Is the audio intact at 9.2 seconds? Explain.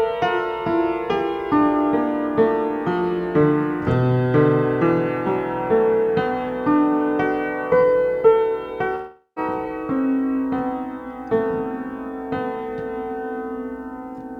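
No. A long network dropout runs from 8.95 to 9.39 s, covering 9.2 s. The likely cause is that audio stopped arriving over the network for this stretch, so about 0.4 s of the original sound is simply gone. To cover the gap, the receiver stretches the last sound it had into a buzzy, fading hiss. That gives way to about 0.1 s of silence before the audio resumes further on, with the lost portion skipped.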